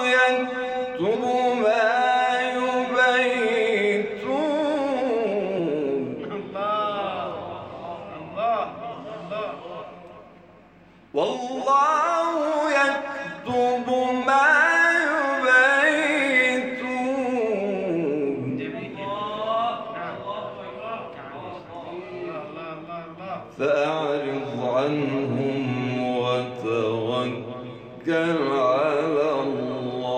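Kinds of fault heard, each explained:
Damaged data in a compressed stream: brief blips at 1.14, 5.58, 8.92 and 13.01 s, where corrupted bytes make the decoder misread frames and lose sync.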